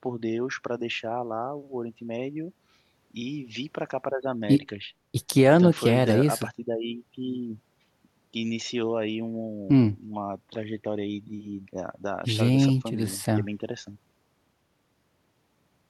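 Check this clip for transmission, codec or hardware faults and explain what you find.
Listening through the speech, nothing stood out that would point to a problem in how it was transmitted, encoded or recorded.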